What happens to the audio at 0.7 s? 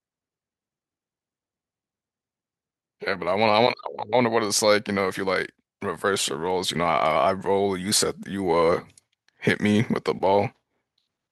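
Nothing goes wrong at 0.7 s: the speech continues cleanly there, with no dropout, click or distortion.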